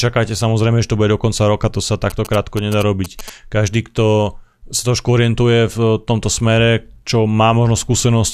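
From 2.10 s to 3.30 s, GSM signalling bursts break into the speech as a galloping dit-dit-dit of brief buzzes pitched at about 217 Hz, roughly 15 dB below the speech. A nearby 2G phone was sending short groups of radio bursts while signalling the network, and the audio circuitry rectified that RF energy, turning the burst envelope into audible pulses at the roughly 217 Hz burst rate.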